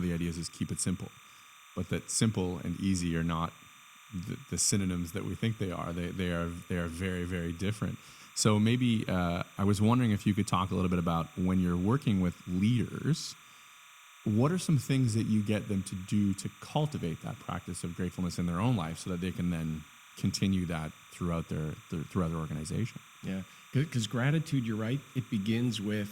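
Timecode bleed runs under the speech for the whole clip. Linear timecode from a nearby track or cable has leaked into the audio path. The code is a square wave that flips between two pitches near 1 and 2 kHz, and its rhythm fits 30-frame timecode. It sounds like a steady, chirping warble behind the speech. It sits roughly 25 dB below the speech, so it is quiet but constant.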